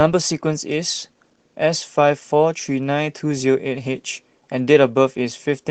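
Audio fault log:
Throughout: Opus voice compression, plainly audible across the whole speech clip. The codec runs in its hybrid arrangement, with a linear-prediction layer modelling the lower band and a transform layer covering the top of a fullband signal. The bit budget, which fits roughly 16 kbps in 20 ms frames, is too small to code the excitation finely, so the speech comes out hoarse, slightly robotic and smeared in its upper detail.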